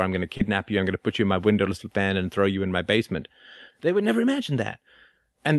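Right after "I'm going to", around 0.37 to 0.41 s, there's a short concealed packet loss: about 20 ms of the call didn't arrive in time, so the receiver papered over it by extending the sound it had just played, then faded back into the real signal as "you I'm going to" begins. You hear it as a quick smear or wobble rather than a dropout, all riding on the call's Opus coding, with its top end stopping around 12 kHz.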